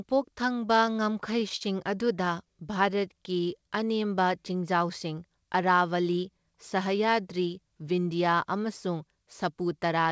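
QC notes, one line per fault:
0.66–2.48 s, repeated stalls (stutter): the speech keeps catching and dragging, with 17 short hitches, the longest about 43 ms. Packets showed up late, the jitter buffer kept running dry, and the receiver stretched the last sound to fill about 0.2 s in total. Nothing is actually lost.
2.74–3.84 s, jitter buffer slow-down: the speech runs at about 90% speed with the pitch unchanged, so sounds come out drawn out. The buffer was building a reserve by repeating single pitch periods over and over, adding 113 ms in all.
5.81–6.47 s, jitter buffer speed-up: the speech goes hurried, at about 112% speed, with the pitch unchanged. The buffer was holding more than it wanted and trimmed short pitch-period chunks again and again, cutting roughly a tenth of a second. The band-limited call sound with nothing above 8 kHz carries through the whole stretch.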